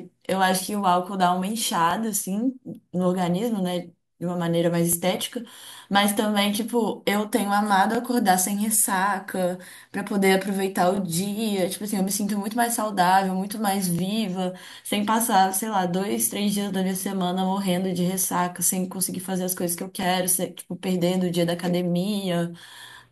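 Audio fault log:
1.91–1.93, 4.93–4.95, 7.95–7.97, 10.97–10.99, 13.99–14.01, 17.01–17.03 and 20.03–20.05 s, overlapping chunks: the speech was handled in 3 s blocks, each beginning 20 ms before the previous one ended. That 20 ms slice plays twice at every seam, producing a brief stutter or click at a steady pace of about one every 3 s. On a waveform, a short stretch of identical cycles repeats with a discontinuity at each join. A spectrogram shows a thin vertical broadband line at each of these times.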